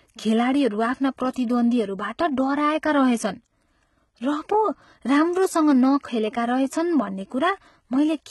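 A speech clip with heavy codec damage throughout, likely from HE-AAC compression at a rate consistent with about 16 kbps. Unlike a plain low-pass, treble persists up to 11.8 kHz, but it is rebuilt by copying lower bands upward, so its harmonics misalign with the speech below.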